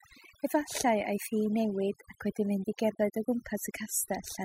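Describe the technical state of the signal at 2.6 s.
At 2.6 s the speech carries overdone noise removal, present across the whole clip rather than starting or stopping here. A noise reducer set too aggressively is pulling individual frequency bands down hard wherever they sit close to its noise estimate. Low-level parts of the voice fall into that range and get removed along with the noise. The gaps drop in level and break up into twinkling, chirpy specks.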